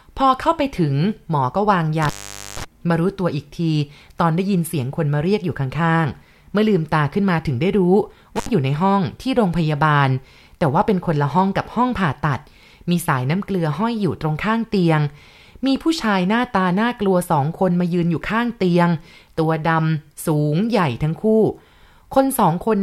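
At 2.02 s the speech drops out in an intermittent contact fault. A loose connection opens for about 0.48 s, leaving only faint hiss. Crackle marks both edges. A shorter break follows at 8.36 s, open for about 66 ms.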